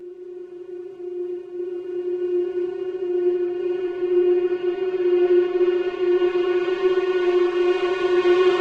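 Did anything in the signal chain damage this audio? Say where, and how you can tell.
Yes. Throughout the clip the sound is hollow and phasey, with fixed notches that don't move as the material changes. The first falls near 100 Hz and further ones repeat up the spectrum, which points to one channel running about 5 ms late before the two were summed to mono. That is channel delay (comb filtering), introduced at the mixdown or buffer stage, where anything common to both channels cancels at evenly spaced frequencies.

From 1.90 to 3.84 s, and again from 7.46 s to the end, the treble goes dull and a gritty, grainy noise rises, clearing after the first stretch when the rate comes back. This is a Bluetooth SBC bit pool drop on the wireless playback link. Congestion pushed the encoder to a smaller bit budget, which fits a halving of the bit pool to around 108 kbps. The top sub-bands were starved and the rest coarsely quantised.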